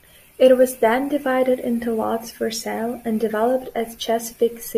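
From 0.83 s to the end of the speech, the converter's sample clock wanders, showing sample clock jitter of around a microsecond or two. Each sample is captured slightly early or late at random, and the resulting error scales with how fast the waveform is changing. It surfaces as a fine hiss and roughness riding on the speech, roughly 40 dB below it, strongest on loud and bright sounds and gone in the pauses.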